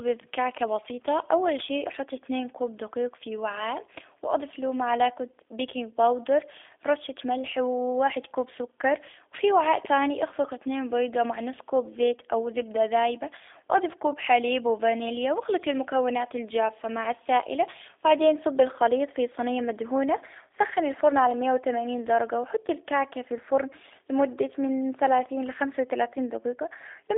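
From start to finish the speech carries G.729 codec damage, plainly audible throughout. The coder rebuilds each 10 ms frame from a vocal-tract filter, a pitch predictor and a few pulses at about 8 kbit/s, so the voice sounds rough and faintly synthetic rather than merely muffled. Nothing comes through above about 3.7 kHz, and the lows fall away below 300 Hz. A plain telephone band-limit would dull the sound the same way without adding that coarse, buzzy texture.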